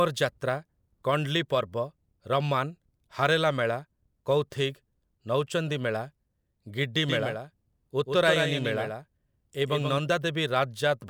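From 7.08 to 9.98 s there is a doubled audio track. A full-band copy of the speech trails around 150 ms behind at roughly 5 dB quieter, likely captured by a slower path. It starts and stops abruptly. A spectrogram shows each syllable shadowed by a fainter, time-shifted duplicate.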